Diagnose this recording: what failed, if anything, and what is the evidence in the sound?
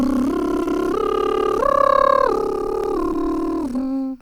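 Network stage: short concealed packet loss occurred twice, at 0.63 to 0.67 s and 3.13 to 3.16 s. Roughly 20 ms of music arrived too late each time. The decoder extended the preceding sound across the gap and blended back, leaving a brief smear or wobble.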